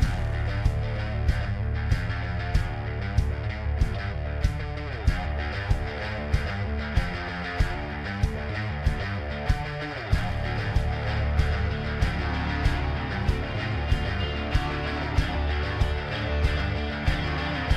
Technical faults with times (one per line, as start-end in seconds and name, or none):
16.60 repeated buffer